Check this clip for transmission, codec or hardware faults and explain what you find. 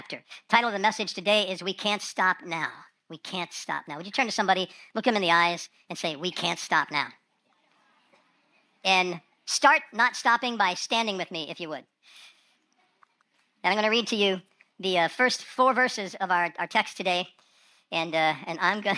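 One fault runs through the whole clip: a wrong sample rate. From start to finish, the sound plays about 1.38 times too fast. Pitch rises with it, by roughly 5.5 semitones. The samples are clocked out faster than they were captured, with no rate conversion in between. So timing and pitch shift together by the same ratio. The shift fits audio recorded at 16 kHz and played at 22 kHz. Everything sounds high, thin and hurried.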